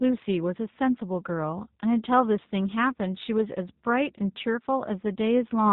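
From start to finish, the speech carries G.729 codec damage, and it is plainly audible. The codec rebuilds each 10 ms frame from a vocal tract filter, a pitch predictor and a few coded pulses. It does not send the waveform itself. Nothing above 4 kHz survives. The speech stays intelligible but sounds slightly rough and synthetic, with a dull, band-limited top end. The coarseness fits the 8 kbit/s G.729A variant.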